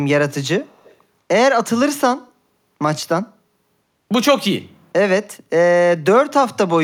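Echo leak at 0.67 to 0.96 s in this speech clip: a faint delayed copy of the talker trails the original by about 118 ms, sitting roughly 35 dB below the direct speech. The likely cause is a far end on loudspeaker whose echo canceller let some of the microphone's pickup of the playback through, which was then sent back down the line.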